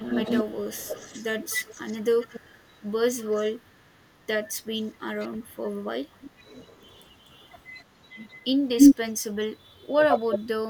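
From 0.00 to 4.09 s there is an echo leak. A copy of the speech returns about 235 ms late, only slightly quieter than the original. The far end's echo canceller likely failed to remove its loudspeaker pickup. Faint echoes follow at 4.82–5.02 s and 7.80–7.84 s. A clearer one, around 25 dB down, runs from 5.73 to 7.15 s. From 8.78 to 9.11 s the echo is louder than the speech. Another strong echo appears at 10.35–10.39 s. The delay creeps from 242 to 254 ms across these.

At 5.26–5.31 s the speech briefly dips by roughly 15 dB. This is speech suppressed in double talk. Both sides were likely talking at once, so the canceller turned the talker down too. From 9.6 to 10.5 s it returns harder, with cuts as deep as about 35 dB in pieces totalling about half a second.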